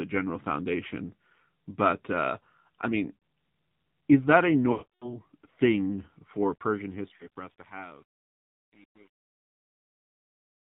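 Speech runs throughout at narrowband mobile quality. Nothing above 4 kHz survives, and the sound is buzzy and synthetic, which points to the AMR narrowband mobile codec at a low rate, around 7.4 kbps. Lost AMR speech frames cause dropouts at 0.88 to 0.91 s (a 20 ms dip), at 3.17 s (about 60 ms), at 7.16 to 7.28 s (about 40 ms), and at 4.72 to 5.18 s. That longest gap is 300 ms. The decoder smears the last good sound and fades it to silence. The final fade-out runs from about 6.4 s to 10.7 s, and it shows truncation distortion from 6.40 s onward. The level steps coarsely, which suggests roughly 9-bit resolution with no dither. From 6.84 s the tail turns gritty.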